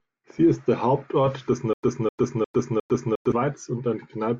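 A speech clip with a stutter with silent gaps from 1.73 s to 3.32 s. A 255 ms burst of sound repeats four times, each followed by about 100 ms of dead silence, so it returns every 355 ms. The likely cause is a stalled stream replaying its last buffered fragment on each retry, and the audio that should have played there is lost. On a waveform this shows as identical blocks separated by flat silent stretches. A spectrogram shows matching patches with empty vertical bands between them.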